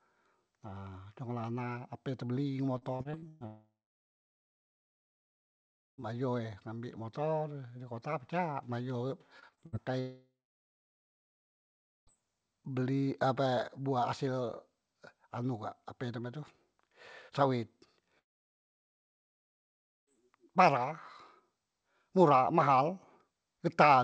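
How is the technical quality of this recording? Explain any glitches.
The recording is marred by network faults: two bursts of choppy, robotic-sounding speech and three long stretches where the audio drops out entirely. The audio is band-limited, with nothing above 8 kHz, which fits a wideband call codec such as G.722.

Repeated packet loss (robotic sound) occurs from 2.78 to 3.43 s, right after "nyekolah anak ape tebeli", and again from 9.40 to 9.75 s, after "di kota pacak bayo". The first burst has six gaps, the longest 124 ms. The second has four, the longest 63 ms. In both, about 41% of the span is patched by stretching the previous sound, so speech turns metallic and stuttering. On a spectrogram, harmonics freeze into short smeared blocks. On the waveform, repeated cycles replace the natural shape.

Long network dropouts occur from 3.46 to 6.01 s, from 10.0 to 12.10 s, and from 18.19 to 20.22 s. 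Each one is most likely a stretch where no packets reached the receiver. The last sound is extended into a brief fading buzz, followed by silence of roughly 2.2 s, 1.7 s and 1.9 s respectively. Speech then resumes with the lost part missing. The first dropout ends on "e ngambek motor di". A spectrogram shows a short decaying smear, then an empty band. The waveform goes flat.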